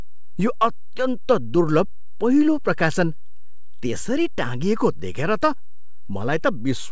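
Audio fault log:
throughout DC offset: a constant bias shifts the whole speech waveform off zero, wasting headroom and showing as steady energy at the spectrum's very bottom, not heard directly.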